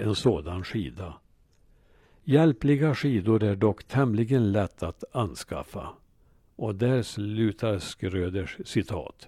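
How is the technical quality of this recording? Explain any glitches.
The speech opens at reduced quality and then improves abruptly. From 0.0 to 4.0 s it has the sound of an adaptive stream starting at a low bitrate: dull, with thin or synthetic-sounding treble and stronger codec artefacts, consistent with a HE-AAC stream at around 24 kbit/s. The player then moves up to a richer version, which fits AAC-LC at about 96 kbit/s, just before "lätt att anskaffa". After that the sound extends to roughly 14.9 kHz. Unlike a dropout or reconnection, the quality step is seamless, with no gap or repeated material.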